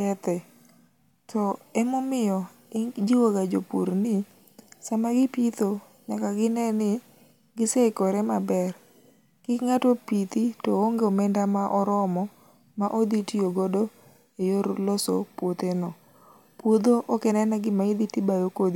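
Nothing stood out on listening to this speech recording.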